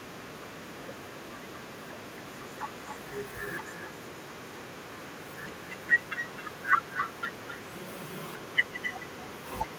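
Speech throughout carries echo with no canceller: every phrase returns roughly 300 ms later, about 9 dB quieter and thinner, because the far end's loudspeaker feeds its microphone uncancelled. On a spectrogram each syllable's pattern reappears as a fainter copy trailing behind it.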